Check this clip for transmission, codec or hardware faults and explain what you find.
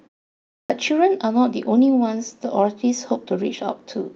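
One fault stands out: a clipped start after a pause at 0.60 to 0.70 s. The audio opens with 0.6 s of silence, during which the output path evidently went idle. When sound resumes, the device is still waking or re-locking, so roughly the first 97 ms are swallowed and the speech begins abruptly, missing its onset. On a waveform the first burst appears as a hard-edged block with no natural rise. On a spectrogram the energy switches on as a sharp vertical edge instead of building gradually.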